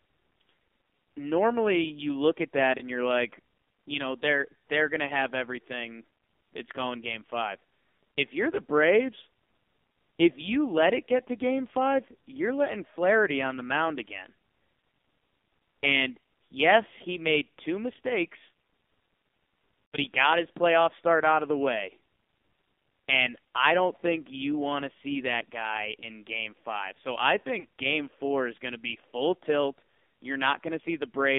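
Throughout, the speech carries the AMR narrowband mobile codec: the band runs only from about 250 Hz to 3.6 kHz, and heavy buzzy, synthetic coloration points to a very low mode, around 5.9 kbps. Because the vocal tract is rebuilt from a handful of pulses per subframe, the audio sounds rough and artificial rather than just muffled. That sets it apart from a simple telephone band-pass filter, which narrows the sound without making it sound synthetic.

Lost AMR speech frames follow, where the decoder covered failed frames by repeating the last pitch and vocal tract settings at falling gain. At 2.78 to 2.89 s, after "you look at that" and before "you're like you know", about 20 ms of speech is lost and is heard as a brief dip or warble. At 19.86 to 19.97 s, just before "he got his playoff", a longer 80 ms loss drags the sound out and fades it. At 27.60 to 27.66 s, before "game four is going", 40 ms is smeared. 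Unlike a hard dropout, none of these cuts cleanly to silence.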